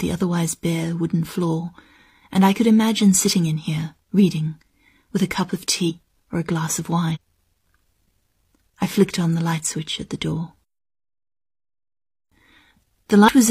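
Compressed frames were skipped three times in this speech clip: runs of encoded frames never reached playback, either missing from the file or rejected by the decoder as damaged. The speech jumps ahead, losing roughly 200 ms between "with a cup of" and "or a glass of" (5.86–5.92 s), about 300 ms just after "or a glass of" (7.11–7.17 s), and about 100 ms at 13.24–13.29 s. Each gap fits whole frames of about 46 ms.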